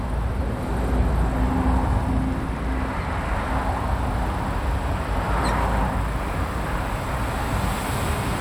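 A recording of everyday sounds, carrying a train of clicks from 1.69 s to 3.38 s. The clicks arrive at a steady 12.5 per second, some twenty in all, each with much the same sharp shape. They peak at roughly the level of the surrounding sound, so they read as a distinct ticking laid over the material rather than part of it. The likely cause is interference from nearby equipment or a faulty connection or power supply.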